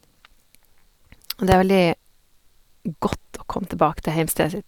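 It's a short speech clip with two loud pops on it, one at 1.52 to 1.54 s and another at 3.13 to 3.15 s, each a single sharp click standing roughly 15 dB above the speech, which carries on underneath. That's the signature of a sudden voltage step getting into the chain, most likely from a plug, switch, static discharge or a driver glitch, briefly shaped by the circuitry downstream.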